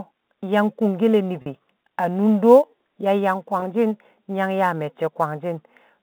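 Telephone-band speech, cut off above roughly 3.7 kHz as expected for G.711 coding, carries sample clock jitter throughout: a faint hiss, about 35 dB below the signal, that thickens on loud, bright passages and vanishes in pauses, visible as level-tracking broadband fuzz on a spectrogram. There is also packet loss with pitch repetition at 1.42–1.46 s (40 ms, consistent with two lost 20 ms packets) and at 3.60–3.62 s (20 ms). Each sounds like a briefly held, buzzy tone, and the waveform shows identical repeated cycles in place of changing speech.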